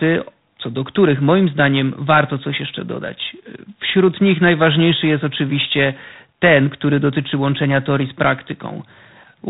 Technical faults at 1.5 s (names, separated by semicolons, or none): G.726 ADPCM